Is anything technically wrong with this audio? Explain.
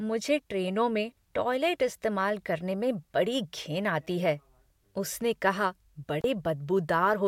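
Yes. At 6.21 to 6.24 s, just after "आती है उसने कहा", the speech drops out for about 35 ms, with a brief crackle at each edge and faint hiss in the gap. This is intermittent contact: a loose cable or plug momentarily opened the signal path.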